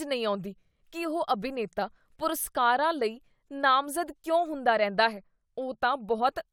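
No dropouts, clicks, distortion, level jumps or timing errors are audible anywhere in this speech.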